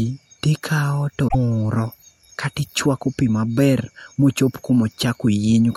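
Right after "to ikawo", at about 1.24 s, there's a short burst of damaged data in the compressed stream that runs to roughly 1.35 s, so about a tenth of a second. Some of the coded bytes there are wrong, and the decoder can't make sense of those frames. It loses its place and hunts for the next valid frame header, and what comes out in the meantime is a brief glitch.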